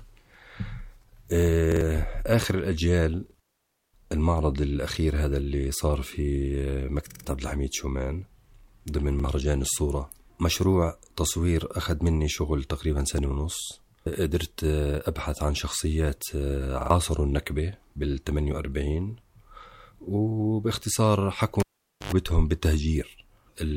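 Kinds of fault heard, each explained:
Repeated buffer: the playback ran dry, so the device looped its last 46 ms chunk, which fits a 2048-sample buffer. You hear quick stutters at 1.72, 3.30, 7.1, 9.20 and 16.81 s, each piece replaying one to three extra times with a hard join.
Cable pulled and plugged in: a live lead came out and went back in, starting at 21.6 s. There's a pop, then near silence for about half a second, then a 90 ms burst of 50 Hz mains buzz while only the tip touched, and another pop as the sound returns at 22.12 s.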